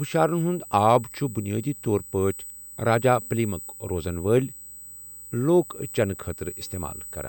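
Current drawn by the USB bus in 125-microsecond microframes leaks into the audio path through power or ground, producing USB whine throughout: a fixed 8 kHz tone, strongest at its 16 kHz harmonic, sitting roughly 15 dB below the speech.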